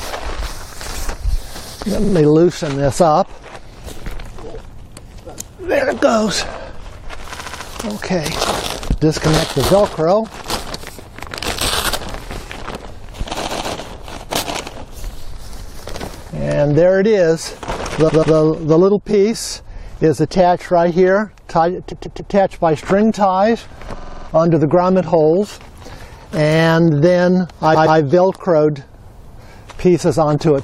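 Runs of compressed frames were sent more than once, so the decoder replays the same short block, producing repeated frames at 2.03, 7.35, 13.43, 18.08, 21.91, 23.98 and 27.74 s. Each block lasts 46 to 139 ms, a size that fits frames of about 23 ms, and replays two to six extra times. The result is a rapid stutter, and each event stretches the audio by 93 to 418 ms.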